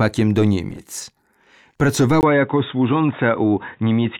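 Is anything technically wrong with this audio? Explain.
Yes. At 2.21 s the sound drops out for about 20 ms, then continues to the end with nothing above 3.8 kHz, a duller tone, and a new noise floor roughly 45 dB down at unchanged level. This is likely an input switched to a poorer device.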